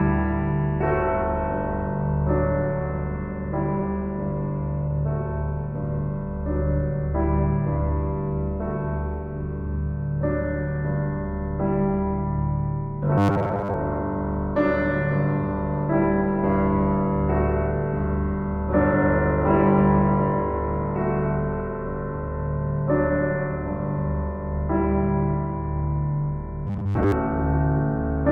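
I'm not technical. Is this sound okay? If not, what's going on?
No. From 13.18 to 13.74 s and again from 26.67 to 27.12 s, the sound turns into a stiff, metallic buzz at a steady 100 Hz. This is robotic sound from repeated short buffers, likely because new audio arrived late, so roughly 10 ms pieces were replayed in place of most of the real sound.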